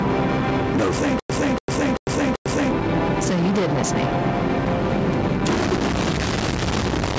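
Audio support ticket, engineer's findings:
Stutter with silent gaps, 1.20–2.71 s: the same 287 ms fragment replays four times with 100 ms silences between. Likely a player stall retrying the last fragment. The missing audio is lost.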